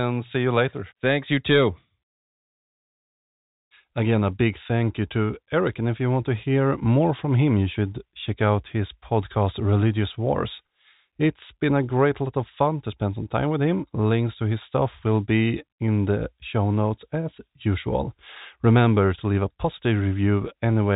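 No technical faults can be heard in the speech, which carries the narrow band of G.711 telephone coding with nothing above 3.8 kHz and at most a faint quantisation hiss that follows the level of the sound.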